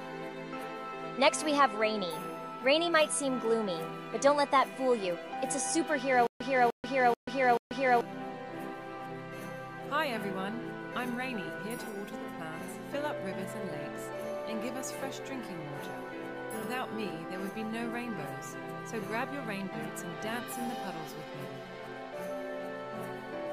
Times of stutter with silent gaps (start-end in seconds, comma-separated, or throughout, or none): 6.27-8.01